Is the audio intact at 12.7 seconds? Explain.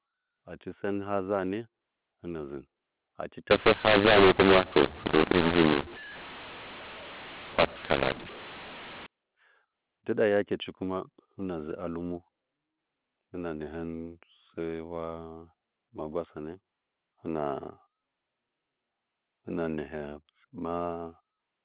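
Yes, the speech at 12.7 seconds is intact, carried through ordinary A-law telephone coding with its narrow telephone bandwidth and nothing breaking up the sound at that moment.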